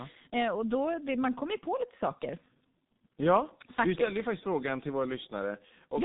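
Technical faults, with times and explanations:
Throughout, G.723.1 codec: the speech has no content above about 3.8 kHz and sounds heavily muffled and hoarse, with consonants smeared, which fits a very low-rate telephony codec near 6 kbit/s rebuilding the voice from a coarse, slowly updated model.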